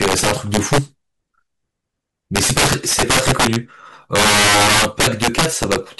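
A gain stage drove the speech about 12 dB past full scale, and instead of being limited the integer values wrapped to the opposite sign. This integer overflow runs throughout, hitting around 7 percent of samples, so loud peaks become violent cracks far harsher than clipping.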